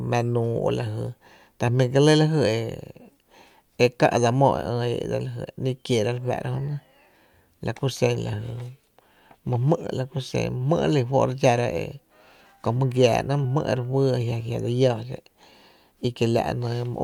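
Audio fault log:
No faults heard.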